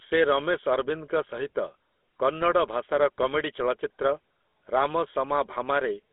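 Speech runs through a GSM full-rate codec for its whole length, giving a buzzy, gravelly roughness, which fits the 13 kbps full-rate mode. A spectrogram shows a telephone band of roughly 250 Hz to 3.5 kHz and empty space above 3.8 kHz.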